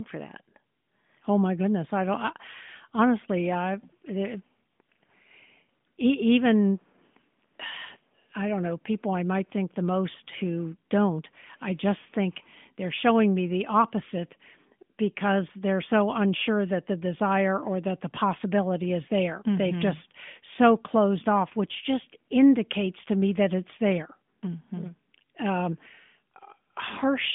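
Nothing stood out on listening to this speech clip, and no technical fault could be heard at any point.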